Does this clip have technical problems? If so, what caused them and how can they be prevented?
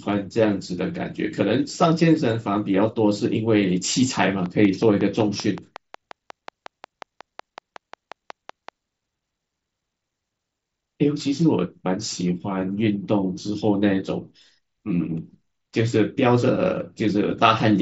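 Yes: a regular train of clicks runs from 4.46 to 8.70 s, about twenty at 5.4 per second, peaking roughly 5 dB above the speech. It shows as evenly spaced vertical lines on a spectrogram and sharp waveform spikes, likely from electrical interference or a faulty connection or power supply. Moving the interface away from other equipment and using shielded cables would prevent it.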